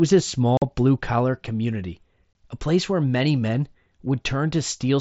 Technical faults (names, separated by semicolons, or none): unconcealed Bluetooth headset packet loss